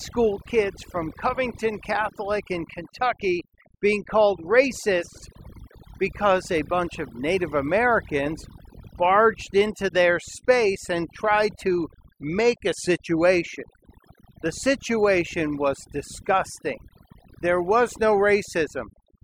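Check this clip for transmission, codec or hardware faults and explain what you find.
One fault runs through the whole clip: overdone noise removal. The speech plays over a near-silent, twinkling background, because aggressive noise reduction switches off frequency bands near its noise estimate, taking quiet speech detail too.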